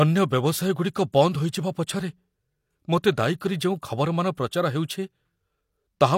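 At 3.40 s, just before "କରି ଯେଉଁ ଖବରମାନ ପ୍ରଚାର", pre-echo appears: codec quantisation noise smears about 10 ms ahead of the attack, heard as short hiss and seen as broadband haze before the onset.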